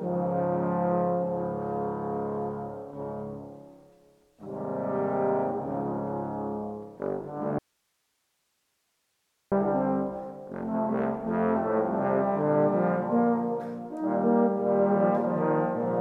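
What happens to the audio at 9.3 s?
At 9.3 s you're inside an audio dropout to a faint residue, running 7.59 to 9.52 s. The signal's gone, leaving only hiss about 50 dB down, likely from a break upstream.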